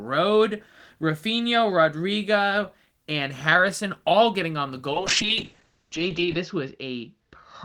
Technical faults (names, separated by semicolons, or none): call bitrate drop